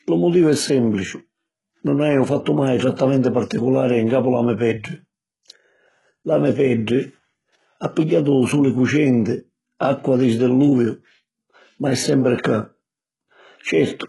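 Throughout the speech, the treble is synthetic and stops above 11.5 kHz, with lispy, metallic s sounds, likely from heavy HE-AAC compression at a very low bitrate, around 12 kbps. Unlike plain lowpass dulling, the top is rebuilt from copied lower bands rather than simply missing. At 2.97 to 2.99 s, just before "particulari ncapu la me", a brief hiss of pre-echo spreads about 20 ms ahead of the attack: codec noise smeared backward within one block. Unlike a click, it leads into the sound and softens the onset.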